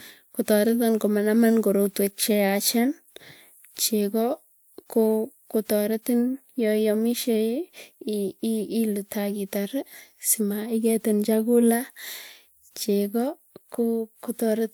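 Nothing in this speech recording stands out as a technical fault anywhere along its run, so there's nothing to flag here.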